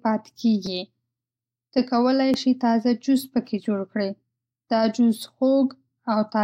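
At 0.66 s there's a repeated buffer: fresh audio didn't reach the output in time, so the device replayed the last roughly 5.8 ms chunk, which fits a 256-sample buffer, twice more, with a hard join at each repeat. It happens again at 2.34 s with one extra play. Because the chunk is so short, neither sounds like a stutter. You get a quick click or tiny buzz, and essentially no speech goes missing.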